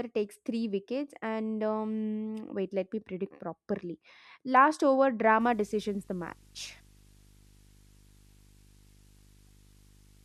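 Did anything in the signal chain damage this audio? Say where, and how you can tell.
Yes, there's video or display buzz getting into the analogue wiring from about 5.40 s to the end. You hear a 50 Hz buzz with hash above it, plus a thin 15.6 kHz line-rate whine, sitting roughly 25 dB under the speech. A screen or video cable is coupling into the audio path.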